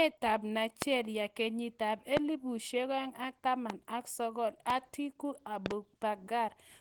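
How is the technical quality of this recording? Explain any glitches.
The recording has two clear problems. Coding damage runs through the whole clip, and a series of sharp pops sits on top of the speech.

Opus compression is heard from start to finish. The speech sounds hoarse, grainy and somewhat muffled. The sound points to a low bitrate, around 16 kbps. At that rate the encoder drops into its hybrid speech mode. It models the lower band as speech and fills the upper band coarsely. The likely cause is therefore heavy Opus encoding. The damage is plainly audible.

Loud pops interrupt the speech five times. They fall at 0.82–0.84 s, 2.17–2.19 s, 3.70–3.72 s and 4.70–4.72 s. At 5.66–5.73 s two pops arrive in quick succession. The first four each last about 20 ms, and all peak well above the speech, roughly 15 to 25 dB louder. The likely cause is a sudden voltage step or spike, from a connector, switch, static or driver glitch. 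Each is heard as a sharp pop while the speech carries on underneath.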